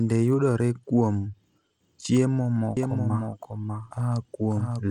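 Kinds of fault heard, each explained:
Bluetooth SBC compression: plainly audible grit and flickering, coarsely quantised upper bands throughout this speech, likely from SBC at around 96 kbps bit allocation.
Doubled audio track: from 2.77 s to the end, a dry full-band copy follows about 0.7 s behind, roughly 5 dB quieter, likely a second out-of-step capture.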